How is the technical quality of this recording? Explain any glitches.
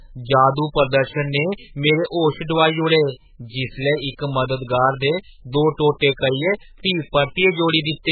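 Poor, with heavy damage across the whole speech recording. MP3 compression throughout is the likely cause: short of bits, the encoder cuts everything above 4.5 kHz and flickers weak frequency lines, leaving muffled, watery sound that fits roughly 8 kbps.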